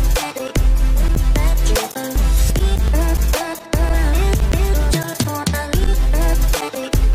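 Nothing here stands out as a technical fault, so there's no problem to point to anywhere in the audio.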